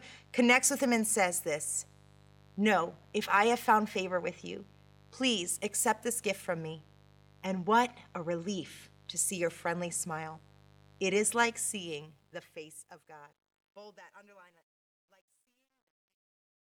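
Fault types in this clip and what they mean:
Mains buzz: Switching spikes from the 50 Hz supply leak into the signal twice per cycle, giving a steady, raspy buzz with harmonics reaching several kHz. It runs through the whole clip, sitting roughly 30 dB below the speech level.
Truncation distortion on a fade: The fade-out from about 11.5 s to 16.6 s is computed without dither at too coarse a resolution, which fits an 11-bit word length. From 13.33 s to 16.65 s the waveform collapses into square steps, sounding gritty.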